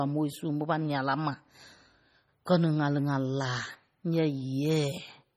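It's a speech clip with heavy MP3 compression damage running throughout: a watery, swirly texture where weak frequency lines flicker on and off between frames, with metallic chirps on the s sounds. That level of damage fits a low bitrate of around 32 kbps, and nothing comes through above 20.6 kHz. The likely cause is the encoder starving for bits. There's also a pre-echo at 2.45 s, where a short hiss lands about 10 ms ahead of a sharp attack. The coding noise meant for the loud onset gets smeared back into the quiet moment before it, so the attack itself sounds soft.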